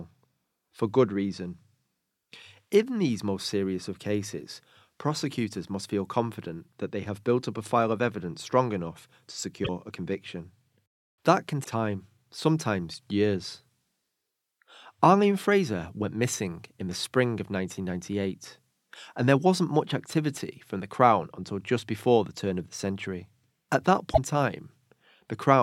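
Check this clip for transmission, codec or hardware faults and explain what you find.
Three short glitches in the speech point to a broken MP3 bit reservoir. At 9.64–9.69 s, between "evidence strong enough to" and "a conviction", at 11.63–11.67 s, just before "time sometimes years", and at 24.13–24.19 s, frames were likely dropped, so the next frame reached back for its borrowed bits and decoded another frame's bytes instead. The sound jumps ahead, and each 36 to 52 ms stretch, one or two 24 ms frames long, comes out garbled.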